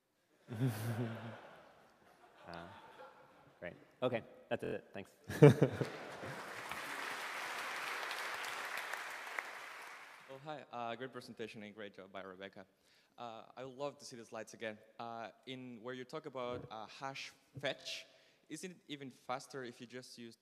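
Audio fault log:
4.64–4.74 s and 17.81–17.86 s: repeated buffer. A 23 ms slice replays four times, then twice, heard as stutters. The waveform shows identical blocks with hard joins, which fits a 1024-sample buffer.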